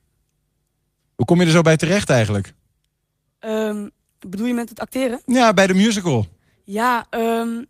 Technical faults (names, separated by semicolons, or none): none